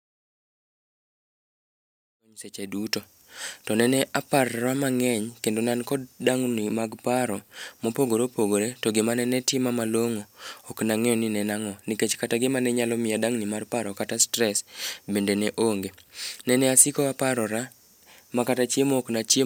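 No technical faults can be heard in this speech clip, which opens with a smooth fade-in that is complete by about 3.2 s.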